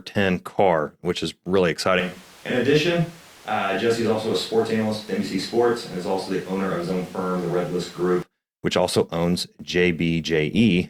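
Switch to a distant microphone, 2.00 to 8.22 s: speech abruptly turns roomy, hollow and quieter over more noise, likely as the close mic dropped out.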